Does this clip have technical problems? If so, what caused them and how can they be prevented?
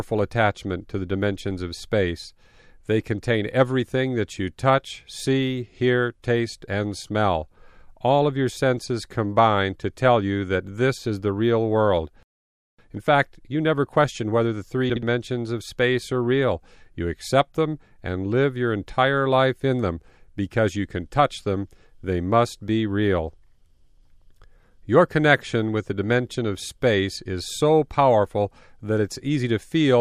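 Yes: frames out of order at 14.90 to 15.03 s, between "question whether the three" and "of space are real". Two neighbouring blocks of about 64 ms each, consistent with two-frame runs, were decoded swapped, producing a garbled flutter. Prevent it by reordering packets by sequence number in a jitter buffer before decoding.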